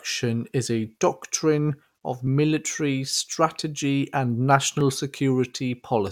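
Regular clicks every 1.27 s from 1.0 to 6.07 s, likely clock drift buffer slips: mismatched device clocks dropping or repeating a few dozen samples each time.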